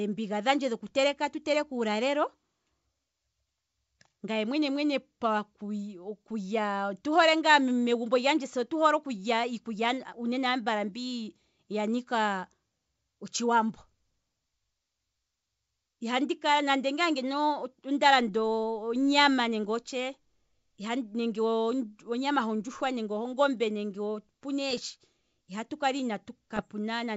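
At 24.71–24.79 s and 26.57–26.64 s, bit errors on an ADPCM link give rough popping bursts that ring on while the decoder recovers, unlike a single clean click.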